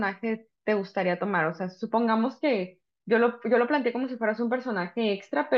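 No technical faults occur anywhere in the speech, so there are none to describe in time order.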